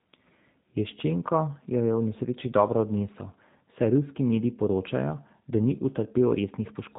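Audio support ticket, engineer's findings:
Speech band-limited throughout, nothing above about 3.8 kHz. Plainly audible rough, slightly synthetic texture. Probable component: G.729 codec (G.729A) in the VoIP path, consistent with 8 kbit/s. Mechanism: speech rebuilt from a vocal tract filter, pitch predictor and sparse pulses per 10 ms frame. Unlike a plain telephone low-pass, which stays clean below the cutoff, the coarse pulse excitation degrades the texture inside the passband.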